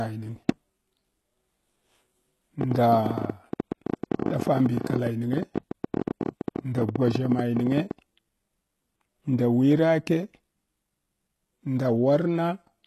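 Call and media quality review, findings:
HE-AAC compression, whole clip. Treble gritty, metallic or lispy on s sounds; codec damage plainly audible. Likely cause: HE-AAC encode at a low rate, consistent with about 16 kbps. Spectral band replication copies lower bands upward under a coarse envelope, so harmonics misalign across the crossover. Spectrogram: hard ceiling, nothing above 12.3 kHz; upper band looks like a pasted copy of the band below, not a continuation of it.

Train of clicks, 2.61 to 7.92 s. Ticking/popping over the audio and in pauses, irregular spacing, about 14.3 per second, around 70 in total, peaks roughly 10 dB above the signal. Likely interference from nearby equipment, or a faulty connection or power supply, injecting repeated similar pulses. Waveform: narrow spikes standing above the envelope. Spectrogram: thin full-band vertical lines at uneven intervals.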